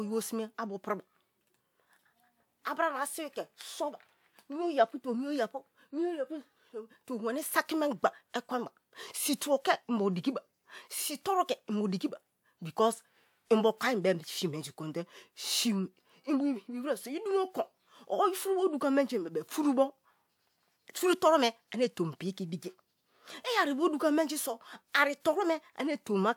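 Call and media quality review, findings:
Nothing stood out on listening to the speech in this recording.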